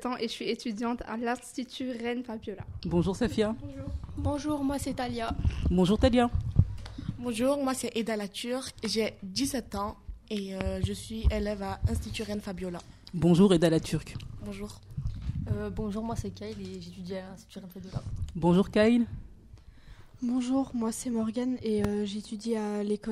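Loud pops at 10.61–10.63 s and 21.84–21.87 s: sharp thumps about 20 then 15 dB over the sound, likely a voltage spike from a switch or static.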